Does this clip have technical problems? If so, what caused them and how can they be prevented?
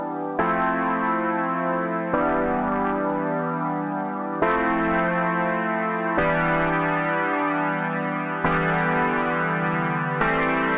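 No, there are no technical problems to fix; the audio passed through a call path whose band stops at 4 kHz, which fits a G.711 telephone codec working as intended.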